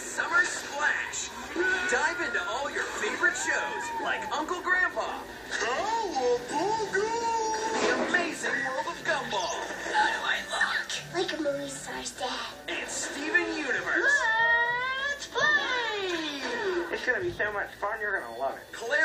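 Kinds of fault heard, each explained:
No faults detected.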